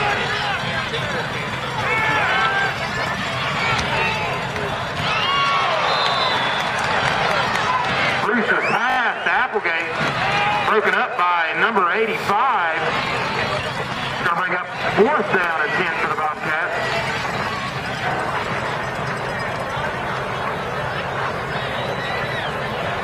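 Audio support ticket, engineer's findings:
Short stutter at 8.90 s to 8.98 s, the same slice replayed four extra times with hard joins. A single brief click-like repeat at 15.44 s. Repeated buffer in the playback path: new audio arrived late, so the last chunk replayed. Repeat length fits a 20 ms buffer. Nothing audibly lost.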